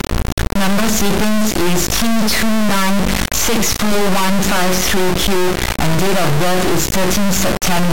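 Integer read as float runs through the whole speech clip: 32-bit integer samples are being interpreted as 32-bit float, so values land near zero or far beyond full scale. The result is a harsh, extremely loud buzzing square wave that collapses into silence wherever the speech goes quiet.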